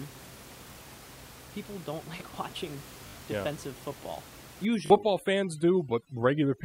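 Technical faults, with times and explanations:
0.74–0.76 s, 3.08–3.14 s and 4.86–4.90 s, repeated buffer: a 20 ms piece replays one, three and two extra times when new audio arrives late, giving hard-joined stutters.
4.65–6.64 s, overdone noise removal: overly strong noise reduction gates bands near the noise floor, so the room noise, about 20 dB below speech, drops and breaks into twinkling specks.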